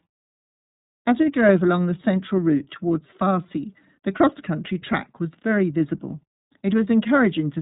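From start to finish the speech sounds boxed-in and faintly rough, with a synthetic edge and nothing above about 3.8 kHz. This is the iLBC codec at work: coding each 30 ms frame independently, at a rate that fits 13.33 kbps, leaves plainly audible damage.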